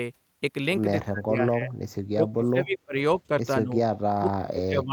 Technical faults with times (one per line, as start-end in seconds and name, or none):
1.09-1.72 speech suppressed in double talk
2.05-2.99 speech suppressed in double talk
3.28-3.77 speech suppressed in double talk
4.16-4.93 speech suppressed in double talk